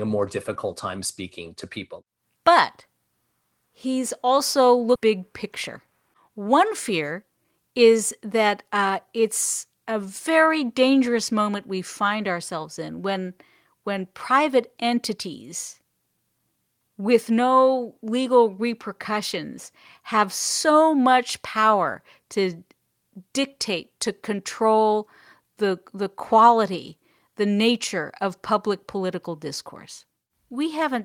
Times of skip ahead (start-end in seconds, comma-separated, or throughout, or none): 4.95